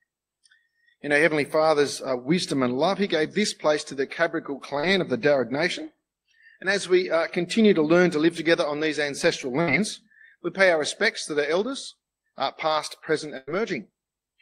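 At 4.79 to 4.85 s there is a short concealed packet loss. About 40 ms of audio never arrived, and the receiver bridged the hole by extending the preceding sound for roughly 35 ms. It sounds like a brief smear, and a spectrogram shows a stretched, slightly blurred column.

Bursts of packet loss follow at 9.61 to 9.69 s and 13.37 to 13.49 s, where about 60 ms and then about 100 ms went missing. Each time the last sound is held and faded, heard as a dying buzz or hiss before the audio jumps ahead. The waveform shows a tapering envelope that ends in an abrupt restart.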